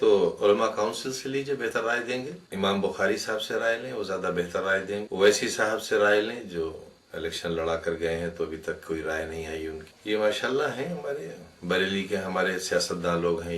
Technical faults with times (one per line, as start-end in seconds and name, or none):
none